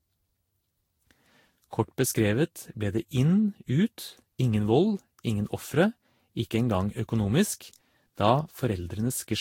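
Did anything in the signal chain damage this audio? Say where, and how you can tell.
Yes, at the codec stage: throughout this speech, generation loss gives swirly, hollow, smeared sound with blurred attacks and nothing above 16.6 kHz, likely from around seven lossy re-encodes near 60 kbit/s.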